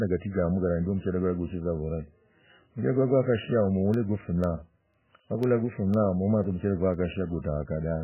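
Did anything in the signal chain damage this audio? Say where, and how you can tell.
Yes. At the codec stage, the whole clip has nothing above 3 kHz and a watery, swirling texture, likely from heavy MP3 compression at a very low bitrate. A spectrogram shows a hard ceiling and flickering patches.

At the driver or buffer stage, periodic USB or driver dropouts begin right after "hikwo gwakoshi": regular ticks every 0.5 s from 3.94 to 6.94 s. Each is a sub-millisecond gap of silence, visible as thin vertical notches in the waveform.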